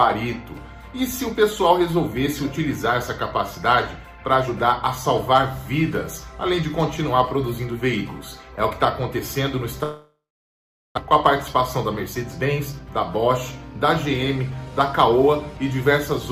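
From 9.83 to 10.99 s the sound turns into a brief fading buzz and then about 760 ms of silence before resuming, with about a second of audio simply gone. This is most likely a long network dropout: the receiver filled the gap by concealment, then let it decay. Shortly after, from 12.06 to 12.89 s, the audio runs hurried at unchanged pitch, about 111% speed. This is a jitter buffer speed-up, where the receiver trimmed pitch-period-sized pieces to shed roughly a tenth of a second of built-up delay.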